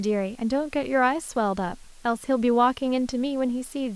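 Low bit depth with dither runs throughout the speech, from start to finish. Noise was added before each sample was rounded to a coarse level, which fits an 8-bit signal. The rounding error becomes a steady, even hiss around 30 dB below the speech, with no distortion.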